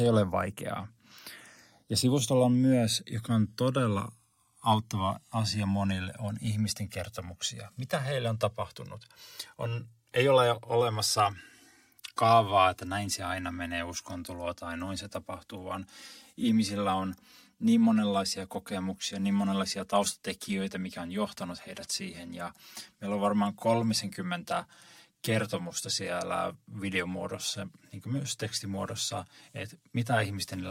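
From start to end, the channels drift apart. The two sides run on separate clocks, a few hundred parts per million apart. The delay between them slowly grows to around 7 ms. Summed to mono, comb notches sweep through the speech, heard as slow flanging.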